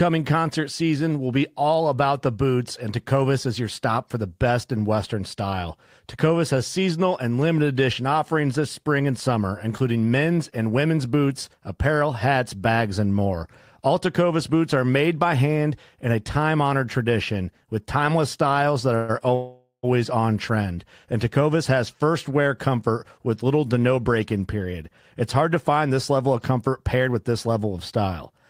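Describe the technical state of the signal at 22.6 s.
At 22.6 s the audio is intact, with no fault audible at that moment.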